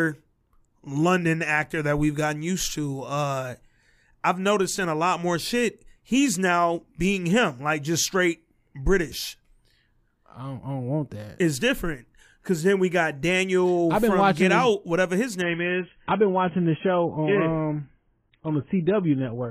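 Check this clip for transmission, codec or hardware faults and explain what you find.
One fault, near the end. Adaptive stream at a lower bitrate, from 15.42 s to the end at 19.51 s, right after "whatever his": the player switched to a much leaner encoding, which fits a drop from roughly 96 to 16 kbit/s AAC. The speech turns abruptly dull, with nothing above 3.8 kHz, and codec artefacts rise, but there is no gap.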